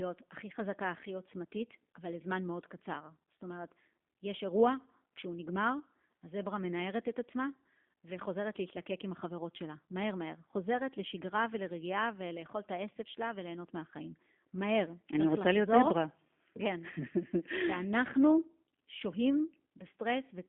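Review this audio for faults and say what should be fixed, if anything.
G.729 codec damage, throughout: the speech is rebuilt from a vocal tract filter and sparse pulses within 200 Hz to 3.5 kHz, which makes it rough and synthetic and fits 8 kbit/s G.729A. To prevent it, record or transmit over a wideband, higher-bitrate path and keep an uncompressed copy instead of this narrowband version.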